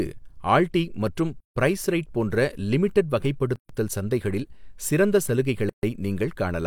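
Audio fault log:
1.40–1.56 s, 3.56–3.69 s, 5.69–5.83 s: gap at a join of encoded pieces. The speech was encoded as separate pieces about 2 s long and joined untrimmed, so each join keeps the encoder's start-up delay and the previous piece's padded last frame. Continuous speech drops into silence for 154 ms, then 136 ms twice, with smeared edges, and resumes exactly where it stopped.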